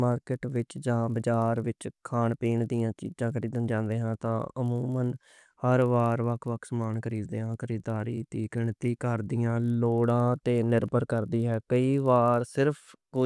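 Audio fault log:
throughout, resampler restarted on every block: each 20 ms chunk gets converted in isolation, so every edge glitches, leaving a 50 Hz buzz that rides only on the speech.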